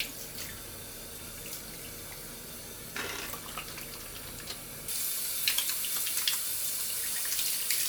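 It's a recording of everyday sound, and from 4.88 s to the end the treble jumps up, with pre-emphasis left on. The top end sits about 11 dB hotter at 10 kHz than at 1 kHz, which fits a J.17 boost whose matching de-emphasis never got applied, so it turns thin, bright and hissy.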